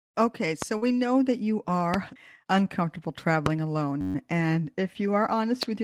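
At 0.62 s a single loud pop stands about 15 dB above the speech, and the speech continues under it. It is likely an electrical step from a plug, switch or driver glitch. Unlike a dropout, nothing is removed; a pulse is added on top.

From 0.77 to 0.84 s, short concealed packet loss fills about 40 ms of missing audio by extending the preceding sound and then blending back. It is heard as a brief smear or wobble rather than silence, which distinguishes it from a hard gap.

Overlapping this, from 0.82 to 1.00 s, just before "that you", a lost packet is rebuilt from error correction. About 100 ms of audio, which fits five 20 ms packets, plays back as rougher, noisier speech but stays continuous.

Right after "that you", at 1.94 s, another loud pop stands about 20 dB above the speech. Single rebuilt 20 ms frames sound briefly grainy at 3.24 s and again at 4.40 s. A third pop of about 20 dB comes at 3.46 s.

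From 4.01 to 4.15 s a system hang loop repeats a 10.67 ms slice about a dozen times. The result is a steady buzz at 93.8 Hz, which fits a 512-sample buffer. It is a mechanical buzz, not a smear or a pop.

A final loud pop of about 20 dB comes at 5.63 s.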